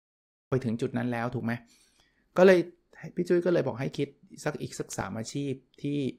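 The clip opens with a cut-off start. For the first 0.52 s there is digital silence, and at 0.52 s the speech begins abruptly partway through a sound, with no natural onset or rise in level. Capture or streaming evidently began late, after the speaker had started. Unlike a fade-in or a noise gate opening slowly, nothing ramps up: the silence is total and the first sound arrives already underway.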